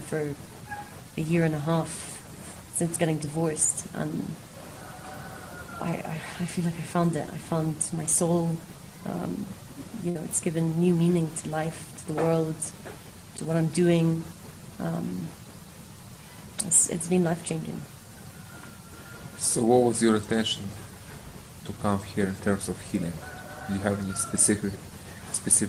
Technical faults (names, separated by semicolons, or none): burst of packet loss; block of digital silence